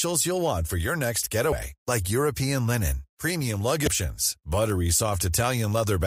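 At 1.49–1.53 s after "want for your next" and 3.84–3.88 s after "linen premium", damaged data in a compressed stream makes the decoder lose frame sync. Each causes a brief glitch, seen as a thin vertical mark.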